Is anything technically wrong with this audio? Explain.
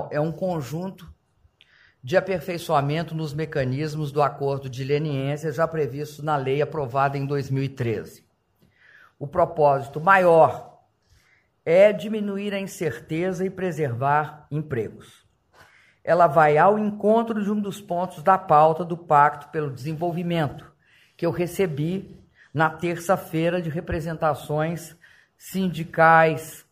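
No, nothing stood out as technically wrong on listening.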